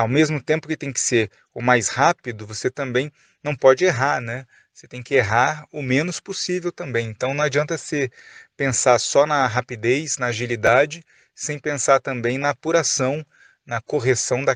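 At 10.67 s, just after "só na rapidez na", fresh audio arrived late, so the device replayed its last 11.6 ms buffer, which fits a 512-sample buffer. This repeated buffer sounds as a brief click-like stutter.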